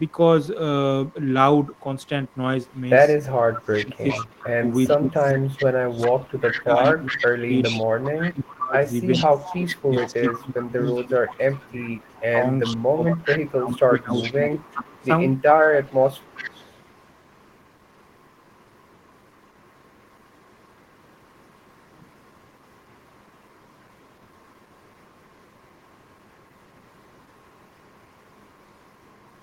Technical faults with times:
0.07-0.11 echo leak
1.07-1.14 echo leak
1.74-2.80 echo leak
3.40-8.57 echo leak
3.69-7.52 speech suppressed in double talk
8.10-15.10 speech suppressed in double talk
9.12-29.42 echo leak

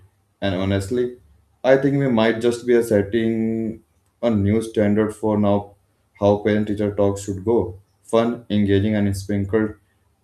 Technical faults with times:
none

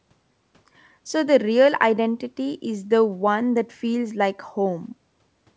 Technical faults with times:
none

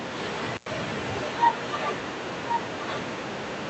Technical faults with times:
0.52-0.72 intermittent contact

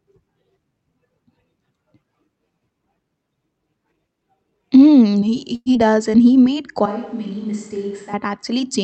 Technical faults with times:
5.55-5.68 call audio freeze
5.74-5.77 short concealed packet loss
5.83-6.11 jitter buffer slow-down
6.86-8.13 switch to a distant microphone

